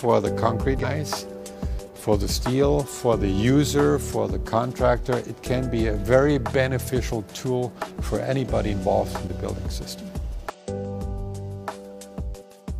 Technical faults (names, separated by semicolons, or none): damaged data in a compressed stream